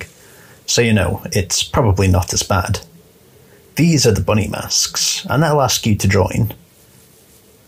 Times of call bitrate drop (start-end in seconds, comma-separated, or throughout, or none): none